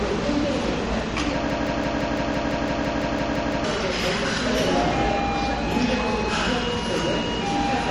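From 1.5 s to 3.64 s, a fragment of about 0.17 s repeats exactly, back to back, 13 times: a broken-record loop. The likely cause is that the player, encoder or stream stalled and kept re-sending its last buffered piece, so the audio that belonged in that stretch is lost.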